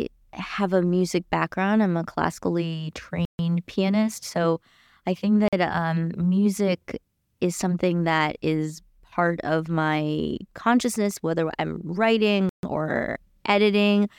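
A block of digital silence cuts in after "background I'm a classically" at 3.25 to 3.39 s (139 ms), after "I think" at 5.48 to 5.53 s (46 ms, which fits a 2048-sample buffer), and after "consciousness whether I'm writing" at 12.49 to 12.63 s (139 ms). Each is a short hole, likely where the output wasn't filled in time, seen as a flat waveform and a blank spectrogram column with hard edges.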